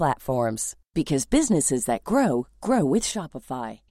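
From 3.11 s to the end, the speech abruptly drops by about 6 dB, likely because one channel drops out before the mono sum.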